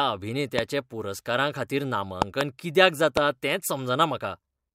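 Loud pops land on this speech clip at 0.59 to 0.61 s, as a double pop spanning 2.22 to 2.43 s, and at 3.17 to 3.19 s, each spiking around 20 dB above the speech, which carries on underneath. The sharp, brief thumps point to a sudden voltage step or pulse entering the chain, likely from a plug, switch, static discharge or driver glitch, with downstream circuitry shaping it into a short, forceful transient.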